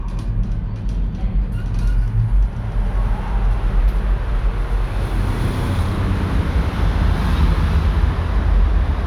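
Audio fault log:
Nothing to log here, this recording of sounds came through without a single problem worth noting.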